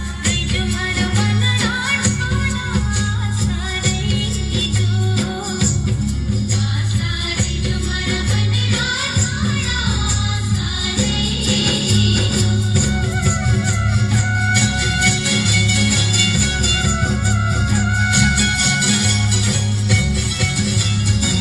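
From 11.46 s to the end, a doubled audio track appears: a second full-band copy of the sound runs about half a second behind the first, at roughly the same level, with no decay or room colouring, so every event is heard twice, cleanly and mechanically. It arrives abruptly, likely from a slower capture path recording the same signal again. On a waveform, each transient is shadowed by an identical one; a spectrogram shows every pattern repeated at a fixed offset.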